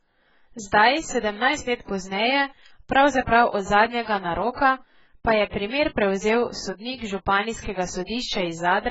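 It's a speech clip with heavy coding damage running the whole way through, most likely AAC compression, AAC-LC to be specific. There's nothing at all above about 7.6 kHz, which is the encoder lowering its cut-off to save bits. That, and how hard the remaining band has been squeezed, points to a very low bitrate, something around 12 kbps. The codec quantises each frame's spectrum against a hearing model, and at that rate it leaves the sound dull and smeared.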